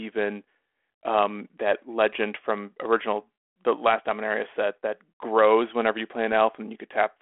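No technical faults can be heard anywhere in the speech. The telephone path sounds like G.726 ADPCM at 32 kbit/s, with a narrow band from 250 Hz to 3.4 kHz and only light coding grain that follows the speech level.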